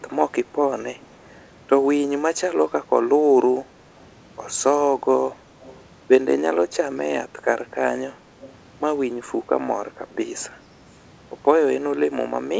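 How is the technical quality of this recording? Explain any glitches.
The recording has three short bursts of echo leak, on a call path whose audio stops at 8 kHz, which fits a wideband codec such as G.722. At 5.64 to 5.81 s, 8.41 to 8.53 s and 10.93 to 11.02 s, the far end's echo canceller likely failed to remove its loudspeaker pickup. That sends back a faint copy of the speech 247 ms late, roughly 25 dB below it, with the last burst far quieter still.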